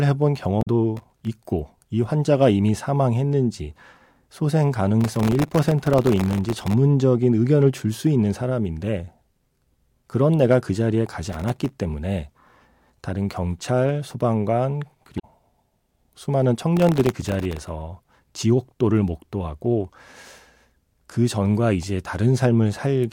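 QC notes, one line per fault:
0.59–0.68 s and 15.16–15.25 s, damaged data in a compressed stream: each is a short blip of under a tenth of a second. The decoder meets corrupted frames, loses sync and searches for the next valid frame header, so the speech breaks.
0.95–1.27 s, 5.01–6.73 s, 11.29–11.73 s and 16.77–17.69 s, processor overload crackle: a gritty tearing rides on the speech, longest in the 5.01 s run. The processor misses buffer deadlines over and over, and each miss leaves a hard-edged sliver of silence. The dense texture fits buffers well under a millisecond long.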